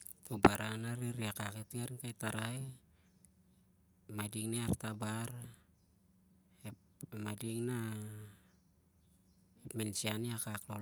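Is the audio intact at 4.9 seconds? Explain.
Yes, the audio is intact at 4.9 seconds, with no fault audible at that moment.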